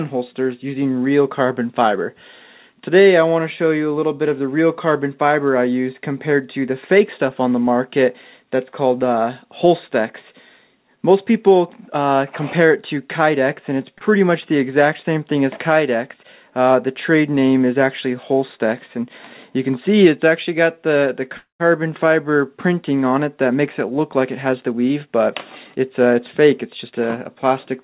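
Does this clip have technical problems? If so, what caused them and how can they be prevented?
Yes, there are three kinds of fault, all heard through a call-codec path with nothing above 4 kHz, which fits G.711 A-law at 64 kbps.

The short stall from a late packet comes at 13.98 to 14.03 s. A packet didn't arrive in time, the jitter buffer ran dry, and the receiver stretched the last bit of sound by about 26 ms until it turned up. Playback then resumed from the same spot, so nothing is lost, but that moment hangs a touch too long with a faint buzzy dip. A slightly deeper jitter buffer target would absorb a late packet like this.

The call audio freeze runs from 21.37 to 21.62 s. The sound carries on as a fading buzz, then drops to silence for about 130 ms, roughly 224 ms of filler in all, before it picks up exactly where it stopped. The likely cause is packets held up in the network long enough to empty the jitter buffer, adding a gap without losing any audio. 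Fixing the congestion or Wi-Fi trouble upstream, or giving the audio traffic priority, would prevent it.

Jitter buffer speed-up appears twice: from 23.49 to 25.23 s at 108% speed, with around 150 ms removed, and from 26.84 to 27.36 s at 110%, with around 50 ms removed. The buffer was holding more audio than it aims for, so the receiver kept cutting out tiny pitch-period slices to catch up. Pitch stays the same, but those stretches sound noticeably hurried. Smoother packet delivery, or a gentler catch-up rate in the buffer, would keep this from being audible.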